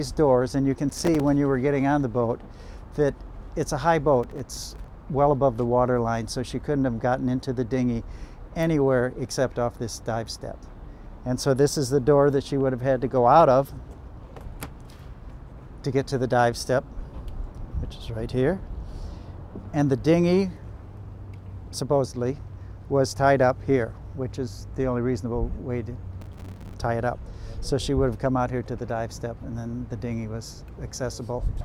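Bursts of processor overload crackle tear through the sound at 0.89–1.20 s, 4.23–4.88 s and 26.22–26.74 s. These are runs of missed deadlines on buffers of a few milliseconds, each leaving a hard-edged silent gap. They show as clustered silent dropouts in the waveform and dense vertical broadband streaks on a spectrogram.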